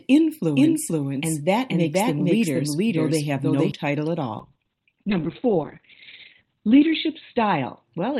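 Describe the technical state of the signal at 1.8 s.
At 1.8 s the speech carries a doubled audio track, running from 0.56 to 3.72 s. A second full-band copy trails about half a second behind at roughly equal level, likely from a slower parallel capture path. On a spectrogram every syllable's pattern repeats, shifted right, with no decay; the copy starts and stops abruptly.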